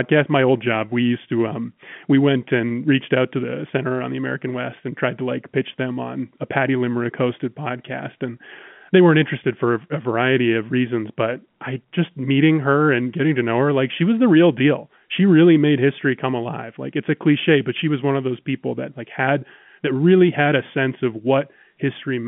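Nothing stood out on listening to this speech over the telephone line.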